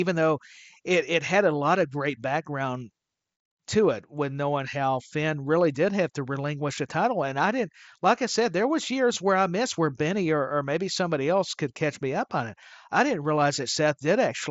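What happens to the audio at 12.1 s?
At 12.1 s the speech carries on intact, with no dropout, glitch or other fault at that point.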